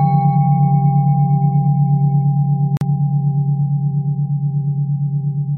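A short clip of sound, assembled from separately encoded pieces that were joined without trimming each encoder's start-up delay and end padding, leaving a gap at a join of encoded pieces. At 2.77 s the continuous sound drops out for about 42 ms, smeared at the edges, then resumes at 2.81 s exactly where it stopped.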